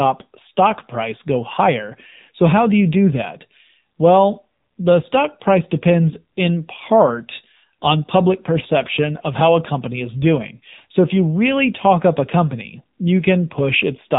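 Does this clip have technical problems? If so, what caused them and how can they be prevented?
Yes. Throughout the speech, AMR narrowband mobile codec damage is plainly audible. Nothing passes above 3.8 kHz, so the speech sounds thin and muffled, and the voice takes on a buzzy, synthetic edge. That fits one of AMR-NB's lower modes, around 7.4 kbps, where a vocal-tract model driven by a few pulses per 5 ms subframe stands in for the real waveform. On a spectrogram, energy stops at a hard ceiling near 3.8 kHz, and harmonics look smeared in 20 ms blocks. To prevent it, record or route the call through a wideband codec such as AMR-WB or Opus, or capture audio locally instead of over the mobile link.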